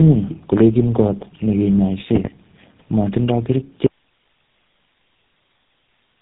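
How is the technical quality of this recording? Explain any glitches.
The recording has two faults: coded, band-limited speech throughout, and a dropout that runs to the end.

Tandem speech coding runs throughout: the speech sounds rough, muffled and warbly, with nothing above 3.8 kHz, because GSM full rate re-coded speech already degraded by G.729A.

An audio dropout to a faint residue occurs at 3.87 s: the speech cuts out abruptly, leaving only hiss about 45 dB down until the end, likely because the signal was lost while the downstream path stayed live.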